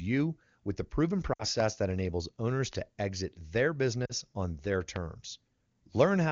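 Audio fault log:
1.33–1.45 s and 4.06–4.12 s, lost AMR speech frames: speech briefly sags toward near silence before recovering slightly rough. About 60 ms and then 40 ms of audio go missing, which fits three and then two 20 ms frames failing their checks. The wideband decoder fills each gap by repeating the last pitch and vocal tract settings at falling gain. On a spectrogram, harmonics flatten into steady horizontal bands that fade. The waveform shows a smooth, shrinking envelope.
2.73–2.75 s and 4.96–4.98 s, loud pop: a single sharp pop sits on top of the speech each time and peaks roughly 15 dB above it, while the speech carries on underneath. Each lasts about 20 ms and is likely a voltage step or spike from a plug, switch, static discharge or driver glitch, shaped by the circuitry that follows. A waveform shows a tall, narrow spike. A spectrogram shows a thin vertical stripe spanning all frequencies.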